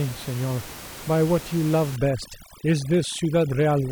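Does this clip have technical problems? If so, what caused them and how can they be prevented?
Yes. From 1.96 s to the end of the clip, there's overdone noise removal. The denoiser is working too hard, pulling individual frequency bands way down or off whenever they get near its noise estimate. The quieter parts of the speech get caught too, and the background drops and breaks up into twinkly specks. The room noise before that sits about 16 dB under the speech. To prevent it, back off the reduction amount and let a little of that room tone stay.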